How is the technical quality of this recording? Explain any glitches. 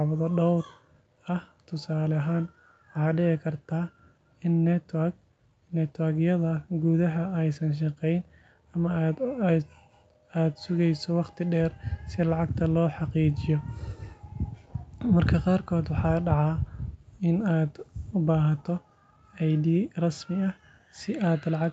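No glitches turn up here; the speech has the usual sound of a call's microphone processing, with the lowest bass trimmed and nothing above 8 kHz, and that is all normal.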